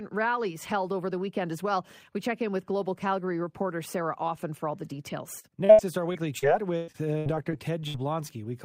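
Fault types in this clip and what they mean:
Repeated packet loss (robotic sound): after "for all the", from 5.39 to 7.96 s, 13 gaps are patched by repeating prior audio, giving choppy, robotic speech; spectrogram shows smeared, repeated frames and abrupt breaks.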